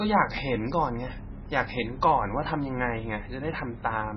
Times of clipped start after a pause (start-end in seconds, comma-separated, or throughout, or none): none